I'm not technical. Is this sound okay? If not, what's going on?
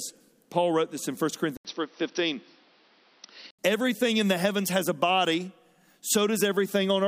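No. From 1.57 to 3.59 s the speech turns dull and boxy, with nothing above about 5.9 kHz, a short gap of about 80 ms and a faint new background noise, at similar loudness. This is likely an input switched to a poorer device.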